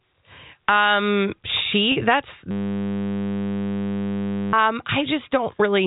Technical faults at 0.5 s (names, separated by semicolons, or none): none